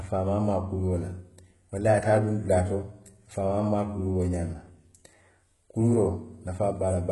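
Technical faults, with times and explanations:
Throughout, HE-AAC compression: the speech carries heavy codec damage, and nothing reaches above 11.5 kHz. The treble that remains sounds bright but synthetic, with s sounds turning gritty and metallic. This is likely spectral band replication: lower bands are copied upward under a coarse envelope, so harmonics fail to line up across the crossover. Unlike a plain low-pass, the top end is not dull. The damage fits a very low bitrate of around 12 kbps.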